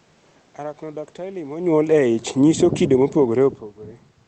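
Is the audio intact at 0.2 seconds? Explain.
Yes, the audio is intact at 0.2 seconds, with only the room noise beneath the speech and the ordinary band-limited character of the call path.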